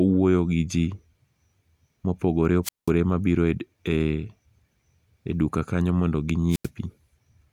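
Twice the analogue FM microphone's radio signal faded until the receiver's squelch muted the output, a wireless microphone squelch dropout: from 2.63 to 2.91 s, hiss rises, then the speech falls into near silence for about 190 ms; from 6.49 to 6.69 s, a shorter hole of about 88 ms.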